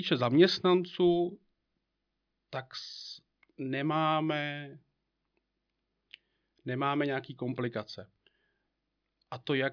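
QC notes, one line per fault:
No faults to note.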